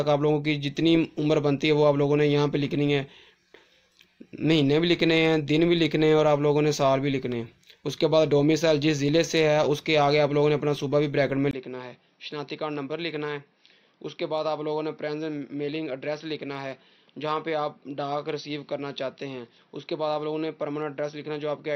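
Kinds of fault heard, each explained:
Input switched to a poorer device: the input likely changed mid-recording to a lesser microphone or headset path. From 11.51 s, after a 20 ms gap, the sound turns dull, losing everything above 5.9 kHz, drops about 10 dB, and gains a faint new background noise.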